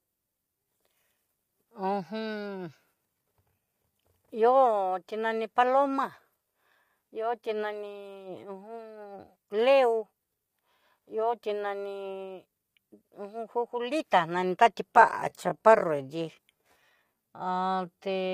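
From the start, the speech carries low-delay AAC compression damage, likely from an AAC-ELD encoder of the kind used for video calls, running at a rate that sounds like roughly 32 kbps. This codec codes about 500 frequency lines a frame with a low-delay window, and at this low bitrate there are too few bits to code the voice cleanly. The damage is plainly audible: the voice sounds rough and grainy, noise fills the gaps between harmonics, and the top band is thin and synthetic, with nothing above 15.6 kHz.

At 14.87 s the pace suddenly drops, and a time-stretched section runs from there to the end of the clip at 18.34 s. The audio plays at about 0.67 times its original speed while the pitch stays where it was. This is likely the result of software lengthening the passage to fill a set duration, repeating short pieces of the signal to do so. The slowed speech drags.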